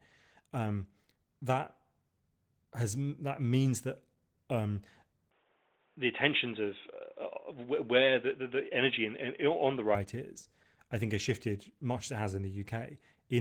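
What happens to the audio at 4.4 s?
At 4.4 s the speech is still under Opus voice compression, which runs through the whole clip: a hybrid mode codes the low band by linear prediction with a thin layer above 8 kHz, consistent with roughly 16 kbps, so the voice sounds plainly muffled, hoarse and slightly robotic.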